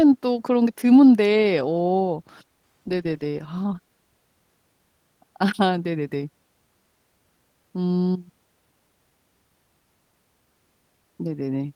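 No technical faults are audible.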